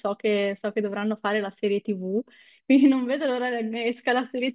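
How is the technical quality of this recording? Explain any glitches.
No glitches can be heard anywhere in this speech recording. There is no technical fault to explain.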